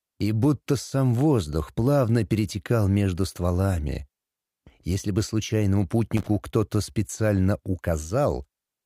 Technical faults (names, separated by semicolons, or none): loose connector crackle